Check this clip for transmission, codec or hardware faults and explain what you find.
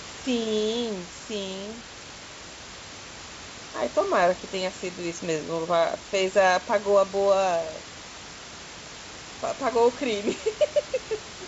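Nothing stood out on listening to this speech clip, which carries room noise at about 14 dB below the voice and the limited bandwidth of G.722 wideband telephone coding, with nothing above about 7.7 kHz.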